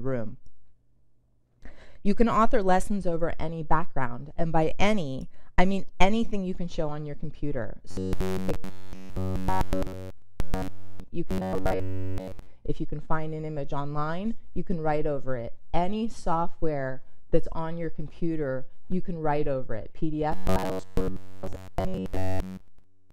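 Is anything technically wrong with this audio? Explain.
Yes. Robotic sound from repeated short buffers appears from 7.91 to 11.04 s, 11.30 to 12.48 s, and 20.32 s to the end. Essentially all of the sound there becomes a rigid metallic buzz at 93.8 Hz, likely from a fragment of about 10.7 ms being replayed while fresh audio is missing.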